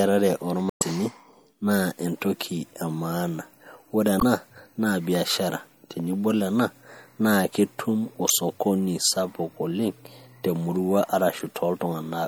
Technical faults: MP3 compression; damaged data in a compressed stream

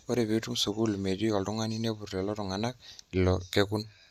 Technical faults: none

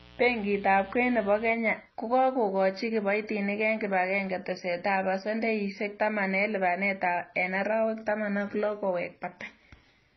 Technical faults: transcoding between lossy codecs; mains buzz

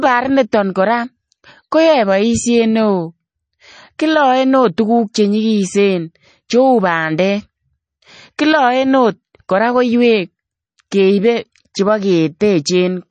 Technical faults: MP3 compression

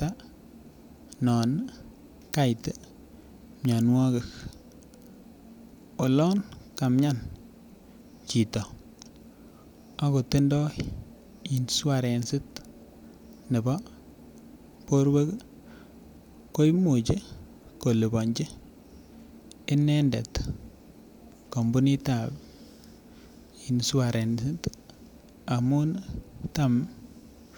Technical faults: none

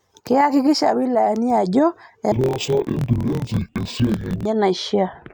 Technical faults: interleaved audio read as planar

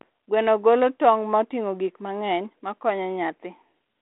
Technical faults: none

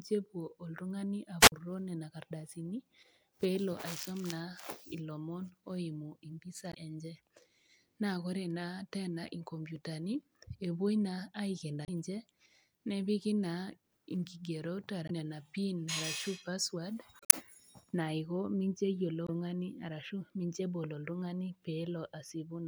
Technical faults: wireless microphone squelch dropout; damaged data in a compressed stream

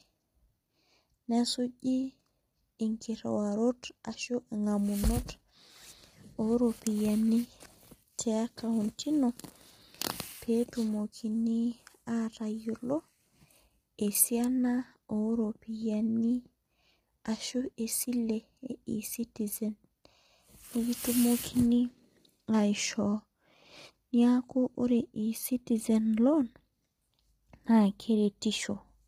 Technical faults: low-delay AAC compression

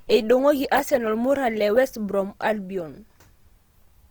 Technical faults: Opus compression

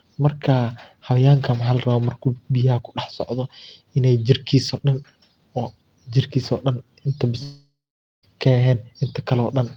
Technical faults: long network dropout

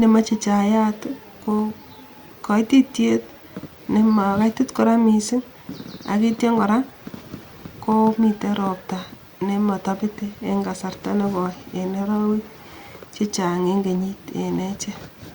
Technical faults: none

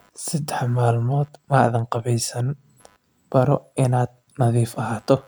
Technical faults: computer activity noise

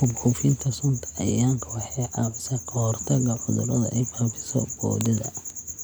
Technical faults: none

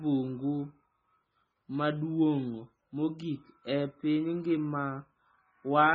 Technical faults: MP3 compression

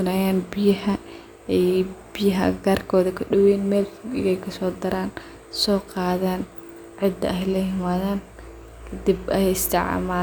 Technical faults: none

